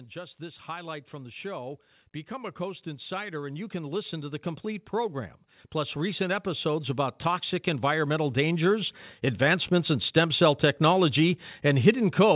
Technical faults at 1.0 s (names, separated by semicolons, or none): automatic gain rising